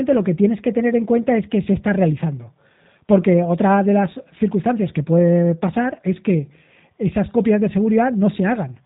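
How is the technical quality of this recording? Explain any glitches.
The quality is limited by plainly audible low-bitrate codec damage throughout the speech. Across the whole clip, G.729 codec coding is plainly audible. Everything above 4 kHz is missing. The speech is rebuilt from a vocal tract filter and sparse pulses, so it sounds rough and synthetic. That fits an 8 kbit/s VoIP link.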